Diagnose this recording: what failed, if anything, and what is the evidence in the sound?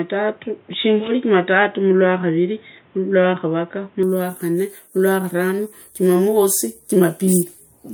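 Driver stage: speech up to 4.03 s has nothing above 3.8 kHz, then widens seamlessly at unchanged level, likely an input switched to a poorer device.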